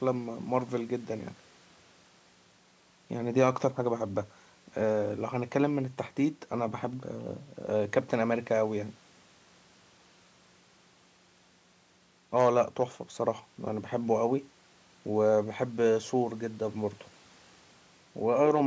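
No audible technical faults.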